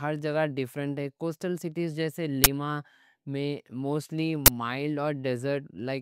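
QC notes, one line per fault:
2.44–2.46 s and 4.46–4.48 s, uninitialised buffer: two brief, loud bursts of harsh digital noise, the first right after "کوسٹل سٹیز جیسے". Playback grabbed a block before any audio was written into it, so leftover memory came out as samples. Each burst lasts 20 ms, which fits one unfilled 20 ms block.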